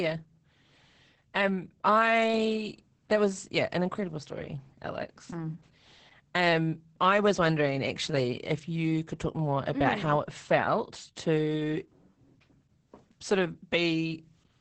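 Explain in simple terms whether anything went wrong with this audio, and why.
Opus voice compression runs through the whole clip: the speech was squeezed hard by a speech-focused coder that rebuilds each voice sound from a rough model, dropping everything above about 8.7 kHz, so it sounds muffled, hoarse and slightly robotic throughout.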